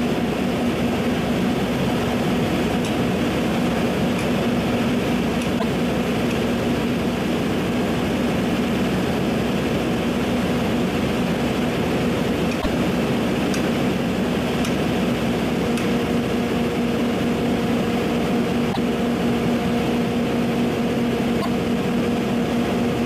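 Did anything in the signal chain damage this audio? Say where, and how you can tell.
Yes. At the codec or storage stage, the likely cause is a broken MP3 bit reservoir after frames were lost. Four short garbled stretches, each following a jump forward, occur at 5.58–5.64 s, 12.61–12.66 s, 18.72–18.77 s and 21.41–21.47 s. Each lasts about 55 ms, roughly two 26.1 ms MP3 frames. When frames go missing, the next frame reaches back for borrowed data and decodes the wrong bytes, leaving brief corrupted sound.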